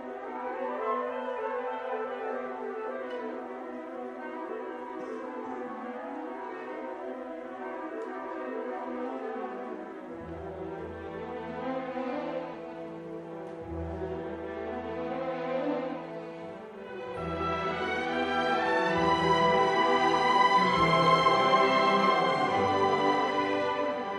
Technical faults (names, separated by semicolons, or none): compressed frames skipped